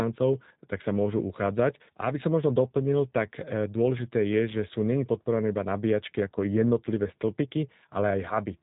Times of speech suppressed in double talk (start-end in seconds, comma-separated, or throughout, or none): none